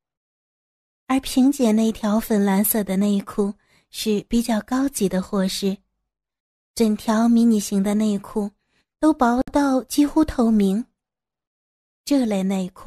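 At 9.42 s the speech drops out for about 60 ms, then resumes where it stopped. This is a gap at a join of encoded pieces. Separately encoded segments were joined untrimmed, leaving start delay and end padding. The edges sound smeared.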